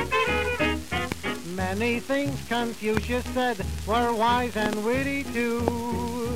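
A loud pop lands at 1.12 to 1.14 s, again at 2.97 to 2.99 s, a quick double pop at 4.66 to 4.75 s, and one more at 5.68 to 5.70 s. The first stands roughly 15 dB above the surrounding sound, the later ones nearer 20 dB. Each is a sharp burst laid on top while the audio carries on beneath it. That sets it apart from a dropout or a splice click, which break the sound. The likely cause is a voltage step or pulse entering the signal chain.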